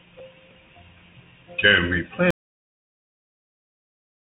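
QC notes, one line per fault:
Throughout: Bluetooth CVSD headset codec. The speech has passed through a narrowband headset link coding each sample as a single up-or-down bit with an adapting step, which points to a 64 kbps CVSD connection. Nothing above 3.8 kHz survives, so the speech sounds boxed-in and dull. The damage is plainly audible: loud, bright sounds outrun the step size and smear into distortion, sibilants turn scratchy, and a granular hiss sits under the speech.
From 2.31 s to the end: audio dropout to silence. The input feed stopped reaching the recorder, most likely through a dropped link or a disconnected or muted device, and recording carried on writing silence. The speech cuts off abruptly at 2.31 s and never returns. The gap is silent with no room tone, so whatever was said after that point is lost.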